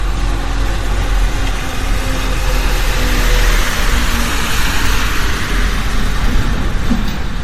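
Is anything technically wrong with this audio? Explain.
Yes. Throughout the clip the sound has generation loss, most likely from being encoded with MP3 about seven times in succession. Nothing is left above 16.4 kHz, and the character points to a bitrate around 64 kbit/s. Each re-encode requantised the audio on a shifted frame grid, so holes and noise piled up. A single pass at that rate would not sound this swirly, hollow and smeared, and transients here are blurred rather than just dulled.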